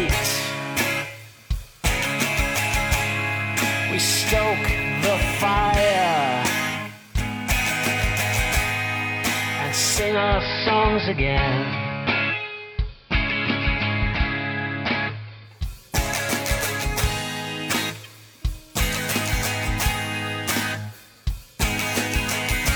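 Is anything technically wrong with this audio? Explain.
Yes. Digital radio blending to analogue from 9.91 to 15.70 s: the receiver lost digital, cross-faded to AM, shifting the level by about 1 dB and raising faint hiss.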